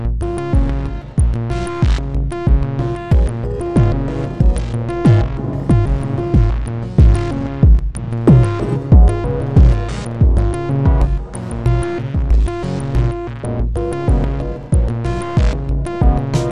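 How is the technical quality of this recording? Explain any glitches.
Nothing stood out as a technical problem on listening, so there are no glitches to explain.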